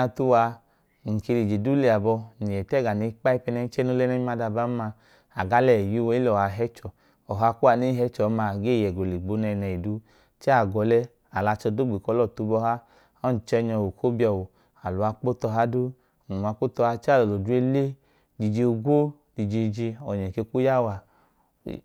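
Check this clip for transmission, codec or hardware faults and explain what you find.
Nothing here points to a technical fault along the signal's path, and the speech holds steady throughout the recording.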